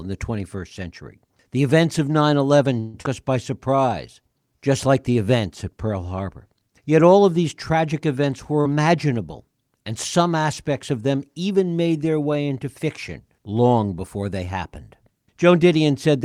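At 2.79 s the sound turns into a continuation of itself, a buzz or hiss that fades over 144 ms until normal audio resumes at 2.97 s. This is a call audio freeze. Packets were likely delayed, the jitter buffer ran dry, and the receiver extended the last sound. Nothing is lost, but the rest of the clip is pushed later.

Straight after, between 3.02 and 3.07 s, there is a skip ahead. About a tenth of a second of audio was discarded, taking back most of the delay the freeze had added. The two sides are joined by a 22 ms fill, so playback jumps forward almost seamlessly.

From 3.50 to 4.58 s a jitter buffer slow-down draws the audio out to 90% speed at unchanged pitch. To build reserve, the receiver repeated single pitch periods or fragments of pauses, adding 116 ms in total.

At 8.61 s there is short concealed packet loss. About 40 ms of audio never reached the decoder in time. The receiver bridged the gap with 41 ms extrapolated from the preceding sound and then blended back, producing a brief smear where the original audio is missing.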